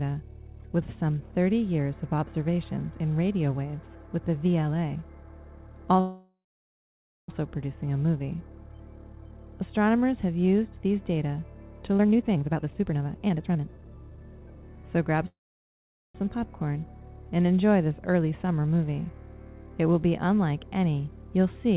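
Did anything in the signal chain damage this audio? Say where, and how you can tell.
Yes, at the network and jitter-buffer stage of the call path. The audio is band-limited to 4 kHz, which fits G.711 mu-law at 64 kbps.

There are two call audio freezes, at 6.0–7.30 s and at 15.28–16.17 s. In each one, the last sound trails off into silence for about 0.9 s and then 0.8 s. When the audio resumes, it picks up right where it stopped, with nothing lost. The pauses add about 1.28 s and 0.87 s of delay. Late packets draining the jitter buffer are the likely cause.

Between 11.98 s and 14.84 s there's a jitter buffer speed-up. The audio runs at 145% speed but keeps its pitch, so it sounds hurried. That's the buffer trimming out pitch-period chunks, around a second and a half in total, to work off the backlog.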